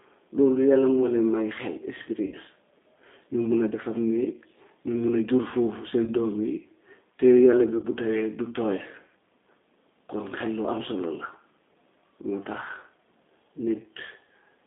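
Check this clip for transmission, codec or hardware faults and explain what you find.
The speech carries two transmission faults: low-rate codec coding throughout and three concealed packet losses.

G.729 codec, throughout: a model-based coder, consistent with 8 kbit/s, squeezes the speech into a 250 Hz to 3.6 kHz line band, leaving it plainly rough and synthetic.

VoIP packet loss concealed by the speech codec, at 2.26–2.36 s, 6.04–6.11 s and 7.77–7.86 s: the decoder extrapolates over gaps of 60, 30 and 60 ms, producing fading buzzy or noisy stretches and weak or distorted audio afterward.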